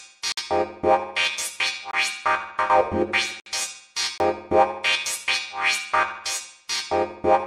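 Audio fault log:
0.32–0.37 s and 3.40–3.46 s: gap at a join of encoded pieces. The sound drops out for about 53 ms and then 62 ms, with softened edges, and resumes where it left off. Separately encoded pieces were joined untrimmed, so encoder start-up delay and last-frame padding remain as silence.
1.91–1.93 s and 4.18–4.20 s: block of digital silence. Each is a hard 23 ms hole, cutting out and back with no fade. The output buffer likely went unfilled in time, and the block length fits a 1024-sample buffer.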